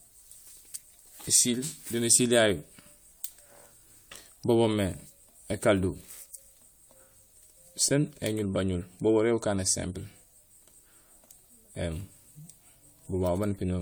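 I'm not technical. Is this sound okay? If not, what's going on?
No. All the way through, the speech has a swirling, watery quality, hollow, as if heard through a tube, and the starts of sounds are soft and smeared rather than crisp. This is most likely generation loss: the recording was squeezed into a compressed format and unpacked again around four times over, and each round threw away a bit more detail and added its own small distortions, which piled up into this washed-out sound.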